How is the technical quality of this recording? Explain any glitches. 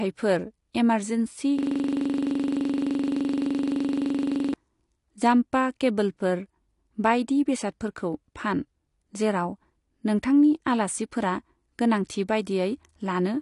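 The recording has two clear problems: plainly audible compression damage throughout, and a stretch where the audio gets stuck repeating itself.

The system hang loop runs from 1.59 to 4.54 s. One 42.67 ms slice, which fits a 2,048-sample buffer, repeats exactly 69 times at 23.4 Hz while the hardware keeps cycling its buffer. That identical repetition separates it from a dropout, where audio simply vanishes.

AAC compression affects the whole clip. Nothing reaches above 11.1 kHz, and the speech sounds dull and smeared, consistent with a low bitrate around 32 kbps. The likely cause is AAC-LC encoding. Unlike a simple low-pass filter, this damage also adds a warbling texture to the sound.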